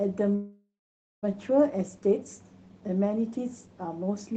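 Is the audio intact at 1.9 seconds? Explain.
Yes, the speech at 1.9 s is intact, with no dropout, click or distortion; it carries only the ordinary character of the Opus call path it passed through.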